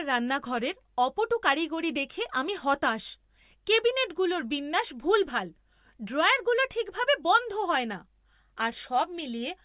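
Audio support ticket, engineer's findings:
No technical faults found in the speech signal on review; nothing to trace to any component in the chain.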